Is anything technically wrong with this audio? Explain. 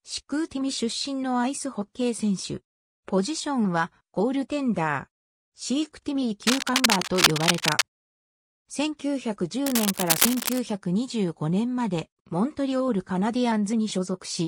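Yes. Cable scratch noise appears from 6.42 to 7.82 s and again from 9.66 to 10.59 s: dense, uneven crackling bursts about as loud as the sound itself, likely from a worn cable or connector being moved so its contact resistance fluctuates rapidly.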